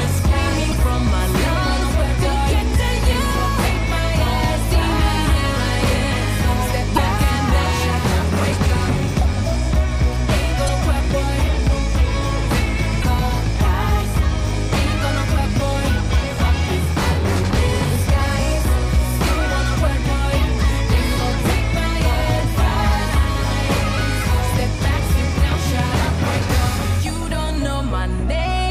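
The audio has four brief bursts of damaged data in a compressed stream, at 0.69–0.74 s, 6.94–6.98 s, 10.65–10.69 s and 13.00–13.04 s, each about 40 ms long. Corrupted bytes make the decoder misread frames and lose sync, producing short chirps or blips.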